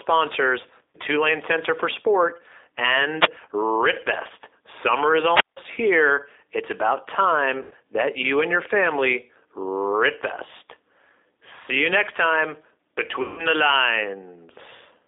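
Throughout, the speech carries G.729 codec coloration. At 8 kbit/s the codec rebuilds each 10 ms frame from a vocal-tract filter, a pitch predictor and a few pulses, and the band sits at roughly 300 Hz to 3.7 kHz. The result is plainly rough and synthetic.

VoIP packet loss concealed by the speech codec hits at 0.90–0.97 s (40 ms lost), 7.63–7.74 s (80 ms) and 13.22–13.46 s (160 ms), which fits runs of two, four and eight 20 ms packets. Each time the decoder extends the last pitch and filter at falling gain, so the sound smears into a fading buzzy tone or coloured noise. It stays weak briefly after packets resume.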